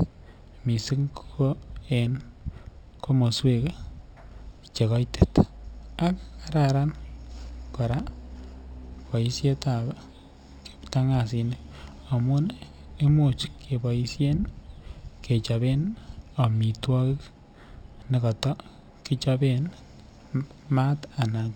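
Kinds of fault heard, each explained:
Imaging from linear upsampling, throughout: the speech was raised to a higher rate by joining its samples with straight lines, a weak filter. That dulls the top of the band near 6 kHz, which fits audio first captured at 12 kHz. It also leaves a faint mirror copy of the spectrum from 6 to 12 kHz, roughly 30 dB below the signal, heard as a light metallic shimmer on sibilants.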